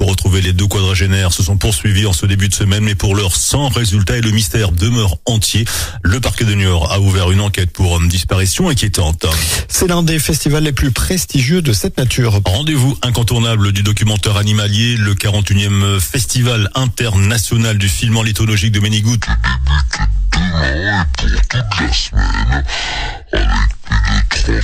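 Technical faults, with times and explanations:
19.21–24.63 s, section at the wrong speed: the closing stretch suddenly turns slow and deep, running at 0.55 times its proper speed and sitting roughly ten semitones lower, because pitch falls with speed. That portion was likely played back against the wrong clock.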